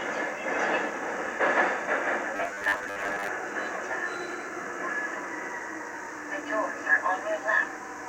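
From 2.36 to 3.28 s the sound turns into a rigid, metallic drone with a fixed 100 Hz buzz. That's robotic sound from repeated short buffers, likely audio arriving too slowly so roughly half the playback is a repeated 10 ms chunk while fresh material gets skipped.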